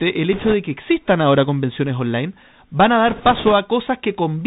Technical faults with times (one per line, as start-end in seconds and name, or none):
0.00-4.46 Bluetooth CVSD headset codec
0.33-0.54 bit errors on a Bluetooth voice link
3.08-3.53 bit errors on a Bluetooth voice link